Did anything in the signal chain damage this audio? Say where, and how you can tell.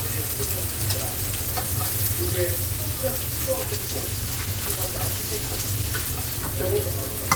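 Yes, a call bitrate drop at the codec stage from 3.68 to 6.75 s. The sound turns coarse and duller, roughest for about 2.3 s, fitting a fall from about 32 to 16 kbps, then recovers without the gaps packet loss leaves.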